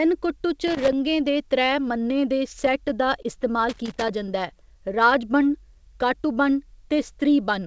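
At 0.67 s a loose connector crackle starts and runs to 0.93 s. A worn contact makes and breaks as it moves, chopping the signal. It comes through as an irregular burst of scratchy crackle over the speech.

From 2.66 s to 3.26 s there are repeated stalls, a stutter. Packets arrived late four times, so the jitter buffer ran dry. The receiver stretched the last sound to bridge each wait. The longest wait was 20 ms. Nothing is lost, but the speech drags and hiccups.

At 3.69 s the loose connector crackle returns and lasts until 4.09 s. It is the same rough, uneven scratching, longer this time. Underneath, the call path's G.722 coding leaves nothing above 8 kHz.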